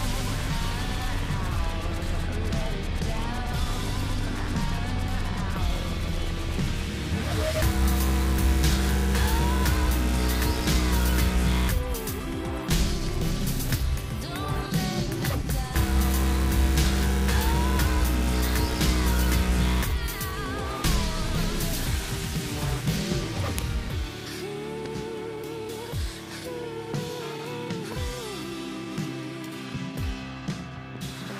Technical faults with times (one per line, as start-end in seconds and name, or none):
23.58 file header played as audio